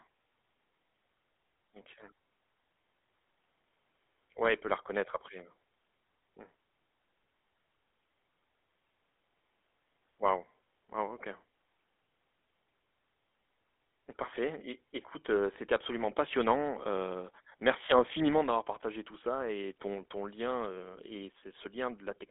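GSM full-rate codec damage runs throughout the speech, from start to finish. The codec rebuilds speech from a vocal-tract model excited by sparse, regularly spaced pulses, at a rate consistent with 13 kbps, leaving a plainly audible buzzy, gravelly roughness within a band of roughly 300 Hz to 3.5 kHz.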